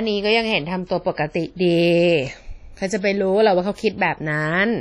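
Speech with heavy, washy ringing and a hiss that pumps with the signal throughout, from likely WMA compression at a low bitrate around 32 kbps; a spectrogram shows a hard ceiling at 12.1 kHz and patchy, holed bands.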